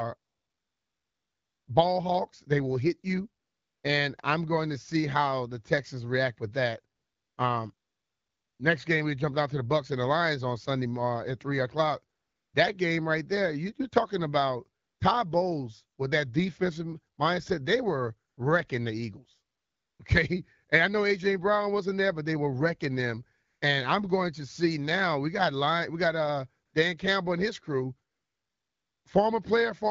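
Between 0.17 s and 29.05 s, twelve pauses are filled with AMR comfort noise, lasting from 20 ms to 1.5 s. The phone stopped sending speech frames, and the receiver substituted a smooth, steady synthetic hiss. Unlike a dropout, the gap never falls silent, and the hiss switches in and out abruptly.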